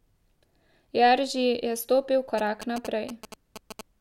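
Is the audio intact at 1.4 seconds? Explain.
Yes, the speech at 1.4 seconds is intact, with no audible dropout, click, distortion or other fault at that moment.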